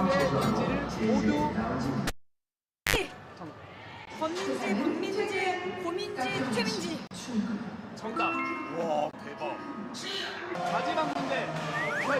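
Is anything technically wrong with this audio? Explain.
Yes. There is a gap between stream segments, heard as short, hard-edged dropouts to silence at 4.05–4.07 s, 7.07–7.11 s, 8.11 s, 9.11–9.13 s and 11.13–11.15 s. They land on one-second boundaries, because the segments' timestamps don't quite meet and the player pads each hole with silence. The holes add about 19, 37, 3, 21 and 19 ms. Nothing is removed; the sound simply pauses and resumes.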